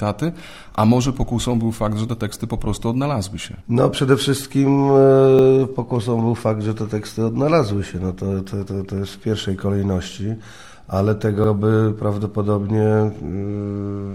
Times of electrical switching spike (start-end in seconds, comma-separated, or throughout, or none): none